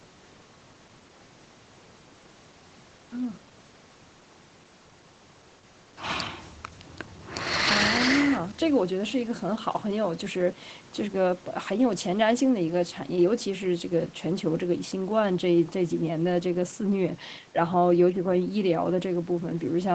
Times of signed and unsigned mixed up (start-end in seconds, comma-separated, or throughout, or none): none